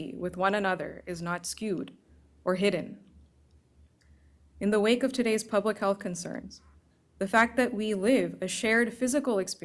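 No technical faults can be heard anywhere in this speech recording.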